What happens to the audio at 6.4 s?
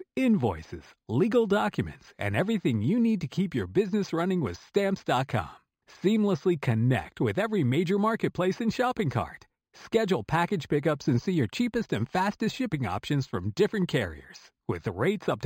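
At 6.4 s the speech carries imaging from linear upsampling, present throughout the clip. The audio sounds like it came from an 11 kHz source raised to 44.1 kHz by straight-line interpolation. Highs are dulled, and mirror images near 5.5 to 11 kHz, roughly 30 dB down, add metallic shimmer to sibilants.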